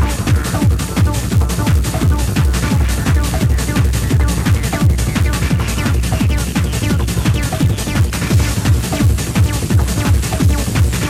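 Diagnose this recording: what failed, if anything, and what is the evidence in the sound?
In the buffer processing stage, a filter restarted on every block loses its state. Each block opens with a transient, producing an 86.1 Hz buzz throughout, which fits a 512-sample buffer.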